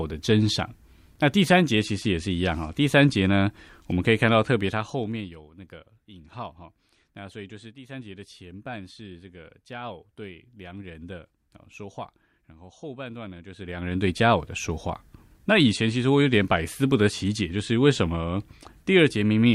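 Zipper noise runs through this speech clip as the level drops by about 20 dB from 4.57 to 5.38 s and climbs back from 13.44 to 14.08 s, moving in unsmoothed 1 dB steps around twenty times a second. The waveform shows a staircase envelope, and the spectrogram shows faint broadband vertical ticks.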